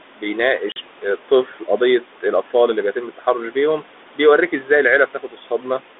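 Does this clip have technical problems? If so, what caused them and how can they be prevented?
Yes. Three kinds of fault can be heard.

Noise suppressor artifacts: Throughout the clip, a noise suppressor estimates the steady background and pulls the bands it judges to be noise down by about 12 dB, frame by frame. The room noise, sitting about 19 dB below the speech, therefore dips in the pauses and swells back under each phrase. Gentler suppression depth, with smoothing of the gain across frames, would prevent this.

Packet loss on an ADPCM call: At 0.72 to 0.78 s, a couple of packets never arrive and the receiver fills about 40 ms with silence. The gap has hard edges. Because the decoder's adaptive predictor and step size have drifted away from the sender's, the speech comes back slightly distorted before it settles. The codec's light damage and 250 Hz to 3.6 kHz band fit 32 kbit/s G.726. 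Packet loss concealment that resets or resynchronises the ADPCM state would prevent this.

Speech cut by the noise suppressor: The suppressor misreads quiet parts of the speech as noise and turns them down along with the background. Around 1.46 to 1.69 s, roughly 150 ms of sound drops by up to about 10 dB. Around 5.07 to 5.62 s, about 200 ms drops by up to about 12 dB. The affected sounds there come out swallowed and faint. A more conservative speech-presence threshold in the suppressor would prevent this.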